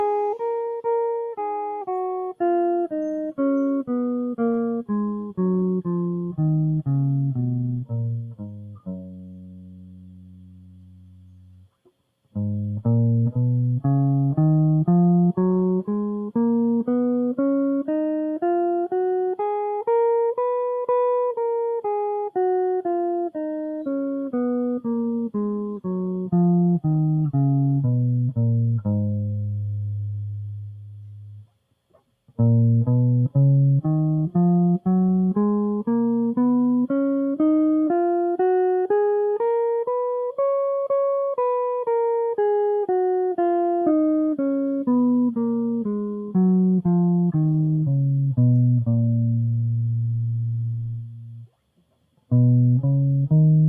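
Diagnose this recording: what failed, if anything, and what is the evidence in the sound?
A speech-oriented noise suppressor, a call-processing stage, was left running on this music and treats sustained tones and ambience as noise. Its gain rides up and down by around 10 dB throughout, so held material swells and sinks while attacks pass largely intact. On a waveform the envelope pumps between transients. On a spectrogram, steady harmonic lines and reverb tails fade and reappear in patches instead of running continuously.

The clearest sound cut by the noise suppressor falls at 8.18 to 11.7 s, where the sound drops by as much as about 13 dB. It happens again at 30.38 to 31.74 s (about 13 dB), at 50.97 to 51.51 s (about 13 dB), and briefly at 51.77 to 52.3 s (about 12 dB). The suppressor judged these sounds to be noise. The waveform narrows sharply there, and the spectrogram goes dim across the band.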